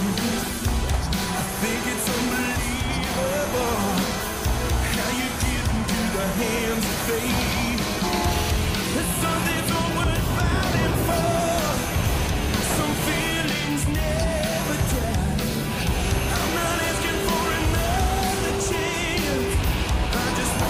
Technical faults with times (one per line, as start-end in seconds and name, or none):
none